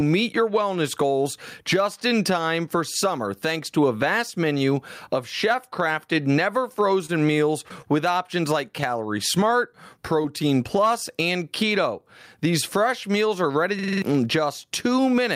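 Speech, run through a gain stage that is likely set far too high and clamped by a fast limiter, shows gain pumping throughout, with level swinging by something like 15 dB and the dynamics squashed flat. At 7.06 to 7.11 s a packet arrived late and the jitter buffer ran dry, so this short stall from a late packet holds the last sound for about 27 ms before resuming exactly where it left off. Two short concealed packet losses follow at 7.69 to 7.72 s and 10.22 to 10.26 s, where about 20 ms of audio never reached the decoder each time, leaving brief smeared patches. At 13.79 to 14.02 s the system hang loop appears: the machine froze while the audio hardware cycled a 46 ms chunk, which fits a 2048-sample buffer, five times at about 21.5 Hz. The result is a machine-gun stutter, and roughly a fifth of a second of real audio is gone.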